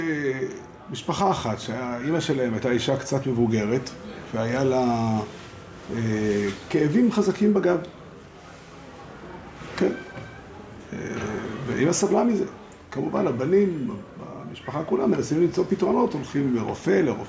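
No technical faults are audible.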